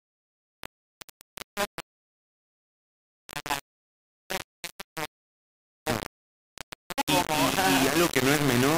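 Low bit depth without dither runs throughout the clip, from start to finish. The sound is coarse and grainy, with a harsh distortion that changes shape with the audio and sits only about 5 dB below the signal. The likely cause is rounding to roughly 3 bits with no dither, so each sample snaps to one of very few levels. Because that error tracks the waveform, quiet passages break up into sputtering grit or drop to silence.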